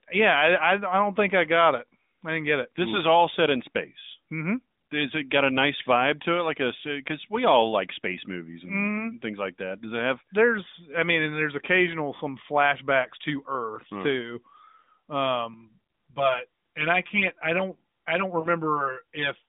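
Speech over a narrowband mobile line, with the sound confined to roughly 200 Hz to 3.7 kHz and the light buzz of the AMR narrowband codec. From 15.54 s to the end, the audio turns hollow and phasey, with a fixed set of notches dulling it. This is channel delay (comb filtering): one channel lags the other by around 5 ms, and when the two are summed to mono, cancellations fall at evenly spaced frequencies starting near 100 Hz. Inside that stretch, from 18.40 to 18.48 s, the sound briefly smears and dips for 40 ms, then returns slightly rough. These are lost AMR speech frames, consistent with two 20 ms frames failing on the radio link. The decoder filled the gap by repeating the last good frame's parameters at falling gain.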